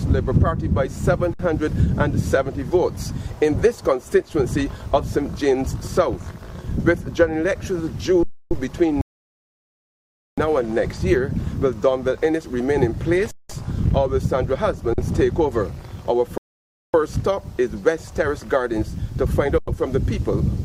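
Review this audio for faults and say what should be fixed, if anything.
Underrun with held sample occurs five times: 1.34 to 1.39 s (57 ms), 8.23 to 8.51 s (279 ms), 13.31 to 13.49 s (186 ms), 14.93 to 14.98 s (46 ms) and 19.58 to 19.68 s (93 ms). Each time the output buffer emptied, and the converter froze on its last sample. The waveform flattens at that level and the sound simply stops without a sharp click. No audio is dropped, so playback picks up where it paused and the restart is soft. The 186 ms and 93 ms gaps fit buffer blocks of 8192 and 4096 samples at 44.1 kHz. Larger output buffers or higher scheduling priority for the audio thread would keep the device fed.

Rebuffering stall occurs twice: 9.01 to 10.38 s, adding 1.36 s, and 16.38 to 16.94 s, adding 0.56 s. Here the player used up the audio it had downloaded and went silent until more arrived. It then resumed at exactly the point where it had stopped. 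Nothing is missing, but the pauses stretch the timeline and break the flow. Deeper pre-buffering or adaptive bitrate switching before the buffer drains would prevent these stalls.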